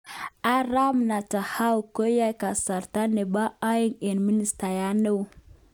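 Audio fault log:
No faults detected in this speech recording.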